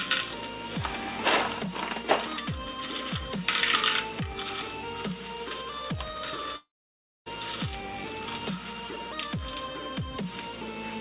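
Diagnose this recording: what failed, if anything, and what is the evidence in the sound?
At the network stage, a long network dropout is the likely cause of the break from 6.56 to 7.28 s. The last sound smears into a fading buzz, then about 0.58 s of near silence follows. Roughly 0.7 s never arrives. Sound resumes afterwards, skipping that part.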